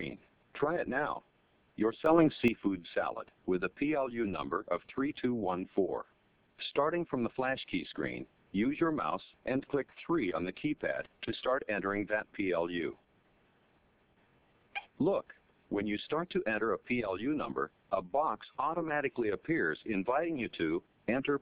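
A gain setting was likely applied without a ramp, causing a sudden gain jump from 2.06 to 2.48 s: sound and background noise rise together by about 8 dB.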